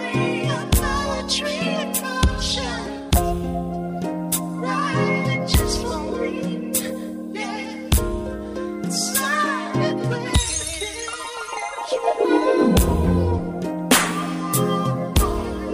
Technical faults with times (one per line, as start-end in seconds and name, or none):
none